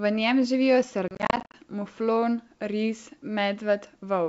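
Packet loss on an ADPCM call, 1.08 to 1.55 s, after "njem živijo": 250 ms drops out as hard-edged silent gaps up to 50 ms, desynchronising the decoder.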